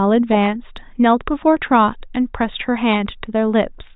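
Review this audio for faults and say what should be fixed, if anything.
Nothing to fix: no faults found in the speech.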